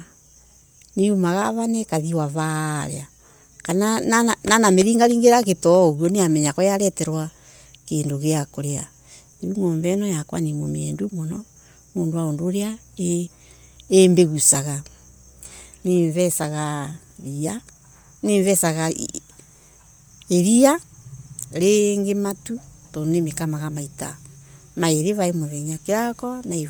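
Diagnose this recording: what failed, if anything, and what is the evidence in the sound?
The fault sits in the codec stage, likely Bluetooth LC3 compression. Throughout the speech, the upper frequencies have a breathy, grainy edge. A spectrogram would show noise-filled high bands in blocks consistent with 10 ms frames at about 48 kbps, and no content above 20.1 kHz.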